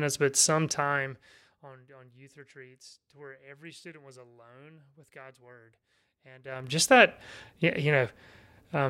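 Zipper noise runs from 0.72 to 1.76 s, between "but some" and "on youth retreats to", as the speech drops about 25 dB in unsmoothed 1 dB steps, roughly 30 a second. It returns at 6.4 to 6.76 s, rising in 3 dB steps. Each jump ticks, where a fade would glide.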